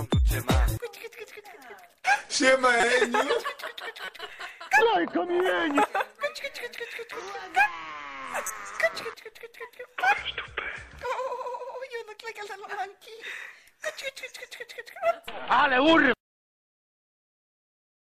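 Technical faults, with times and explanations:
2.80 to 2.84 s, 4.05 to 4.08 s and 8.46 to 8.56 s: corrupt frame decoded. The decoder played frames with flipped bits, so misread codes and gains scatter energy into wrong frequency bands, giving short bursts, loudest at 2.80 s (about -10 dBFS), about -20 dBFS elsewhere. Each burst's length fits a few damaged frames. A spectrogram shows brief vertical smears of misplaced energy; the waveform shows sudden spiky patches.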